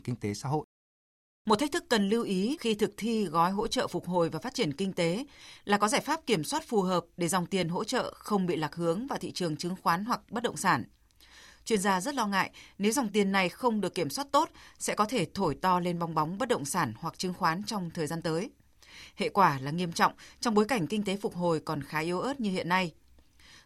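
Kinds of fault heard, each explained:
No kinds of fault are heard in this speech.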